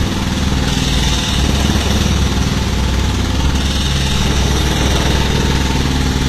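HE-AAC compression runs from start to finish. The treble here is likely rebuilt rather than coded. Only the lower spectrum seems to carry real detail, and the upper bands are copied up from below and shaped by a coarse envelope, which fits a low bitrate around 24 kbps. The result is plainly audible: bright but synthetic highs with a gritty, metallic edge where harmonics fail to line up, and nothing at all above 14.9 kHz.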